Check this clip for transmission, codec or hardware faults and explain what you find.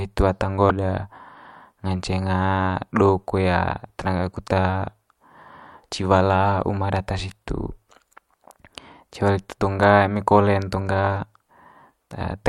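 One codec fault is audible in the speech. From 0.69 to 0.71 s, right after "hitu ata", the speech skips ahead and a 24 ms stretch is disrupted where the missing stretch should be. The likely cause is a broken MP3 bit reservoir. Frames were cut out, so the next frame went looking for the bits it had borrowed and decoded bytes belonging to another frame. A plain dropout would only leave a gap, but here the following frame decodes the wrong data.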